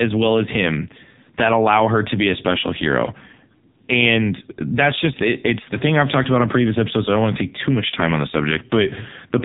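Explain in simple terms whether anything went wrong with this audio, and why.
Throughout the speech, the AMR narrowband mobile codec, squeezed hard, has damaged the sound. Nothing above about 3.8 kHz survives, so it sounds phone-like, but the buzzy, synthetic edge on the voice is what sets it apart from simple muffling by a filter.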